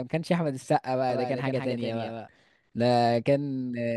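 A doubled audio track runs from 1.10 s to 2.28 s. A second, full-band copy of the speech sits roughly 150 ms behind the original and about 5 dB quieter, so each syllable is trailed by a clean repeat with no decay or room colour. The copy appears and vanishes abruptly at those two points. This most likely comes from the signal being captured a second time through a slower path and mixed back in.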